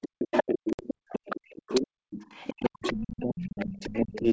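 Across the whole clip, 0.0 to 4.28 s, the echo canceller likely confused both talkers during double talk, so speech is suppressed in double talk: the voice dips, sometimes by about 40 dB, for roughly three seconds in total. From 0.32 to 1.81 s, the other side's voice is leaking through, likely because the echo canceller left loudspeaker pickup in the microphone signal. It sits only slightly below the main speech. From 0.73 to 0.84 s, packet loss on an ADPCM call drops 60 ms, which suggests several packets, into hard silence. The decoder's predictor then falls out of step with the sender's, and speech resumes slightly distorted before settling. The leak returns from 2.22 to 3.22 s, well below the speech, and faintly from 3.59 to 4.2 s.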